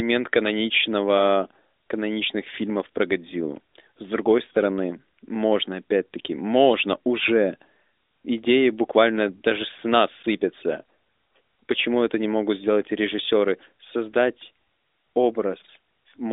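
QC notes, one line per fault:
No fault found in this clip.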